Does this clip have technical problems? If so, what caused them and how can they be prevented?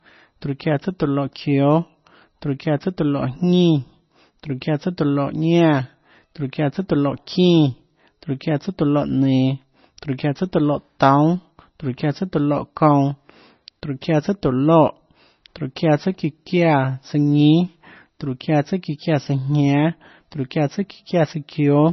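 Yes. The whole clip is dull and watery, with nothing above 6 kHz. That heavy damage is likely MP3 compression at a very low bitrate, perhaps around 24 kbps. Encoding at a higher bitrate prevents it.

At 4.61 s, a brief hiss of about 10 ms comes just before a sharp attack. This is pre-echo. The codec spread its noise across the quiet moment before the onset. A higher bitrate or a codec with shorter blocks prevents it.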